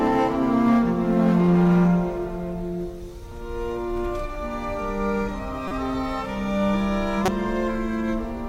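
Hard clipping affects the opening of the audio, from 0.03 to 1.94 s. The signal is driven about 5 dB past what a stage could pass, so peaks are cut flat and crackle harshly. On the waveform they appear as squared-off tops, and the spectrogram shows smeared high harmonics. Later, a corrupt frame decoded produces short bursts at 5.68 to 5.72 s and 7.25 to 7.28 s. Each burst spans what sounds like about two damaged frames, reaching roughly −15 and −10 dBFS. On the spectrogram, each appears as a brief vertical blotch of misplaced energy.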